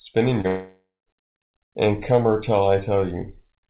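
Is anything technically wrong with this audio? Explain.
Yes, two faults come one after the other early in the clip, and the speech is band-limited throughout, with nothing above 4 kHz, which fits a G.711 mu-law call path at 64 kbps.

From 0.41 to 0.47 s there is a brief smear where the sound wobbles rather than continuing cleanly. This is short concealed packet loss. About 30 ms of audio never reached the decoder in time, so the receiver extended the preceding sound to bridge the gap. Because the patch is made up from what came just before, it sounds slightly off instead of silent.

Straight afterwards, from 0.47 to 1.09 s, the smear stretches into a synthetic continuation that gradually fades, ending in roughly 0.2 s of silence before the speech resumes. The speech picks up further along and does not include what was said in the gap. This is most likely a long network dropout. About 600 ms of audio went missing, and the receiver kept generating the last sound until its output decayed to nothing.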